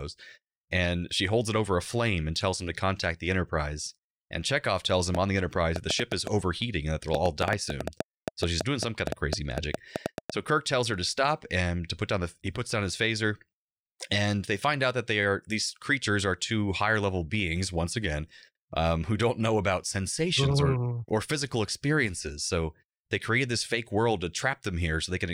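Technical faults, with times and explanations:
5.15 to 10.31 s, train of clicks: right after "tells him", about thirty clicks of much the same shape tick in at an uneven pace, around five a second, peaking roughly 15 dB above the speech and audible in the gaps. This is likely interference from nearby gear or a faulty connection or power supply.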